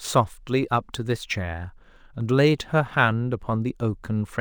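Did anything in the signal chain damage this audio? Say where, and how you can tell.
Yes: imaging from linear upsampling throughout, at the sample-rate conversion stage. A faint mirrored band between 12 and 24 kHz, roughly 35 dB down, suggests a 24 kHz source raised to 48 kHz with straight-line interpolation.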